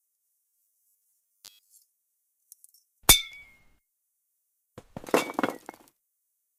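Robotic sound from repeated short buffers, 0.46 to 1.78 s: a rigid 100 Hz buzz, likely from stale audio replayed in what fits 10 ms chunks.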